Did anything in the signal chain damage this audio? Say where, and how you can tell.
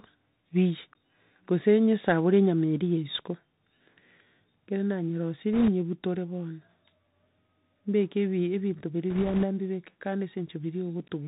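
Yes. The codec stage has narrowed the whole clip: nothing passes above 4 kHz, sibilants turn scratchy, and a granular hiss sits under the speech. That fits a Bluetooth CVSD headset codec at 64 kbps. A one-bit delta modulator's adapting step lags loud, fast high content, which a plain low-pass filter would not do.

The radio link adds bit errors on a Bluetooth voice link at 5.54–5.70 s and 9.10–9.45 s, heard as a rushing crackle at an error rate of a few percent. Each CVSD bit carries little weight and its error dies away, so there are no sharp clicks or silent gaps as packet loss would leave.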